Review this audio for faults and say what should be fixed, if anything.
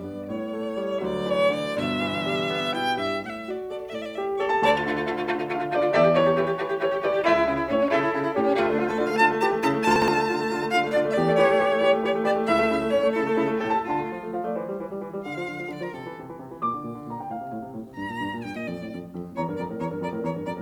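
At 9.96 to 10.08 s the music has chunks out of order: a 60 ms chunk arrives one chunk late and swaps places with its neighbour, so the passage jumbles at three hard joins. Unlike a dropout, nothing is missing and no gap is heard. To prevent it, sequence-number each chunk and reorder in a jitter buffer before playback or writing.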